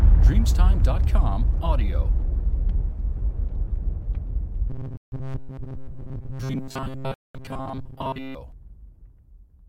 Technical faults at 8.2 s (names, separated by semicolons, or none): robotic sound from repeated short buffers